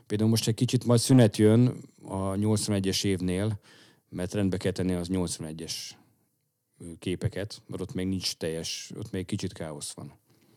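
From 0.76 s to 1.47 s, just after "most egy", the speech runs into hard clipping. The signal arrives about 4 dB hotter than a stage in the chain can pass, so every peak in that stretch is sliced off flat at the ceiling. Those squared-off tops generate harmonics well above the voice's own range, and the result is a gritty crackle that rides each louder syllable for that part of a second.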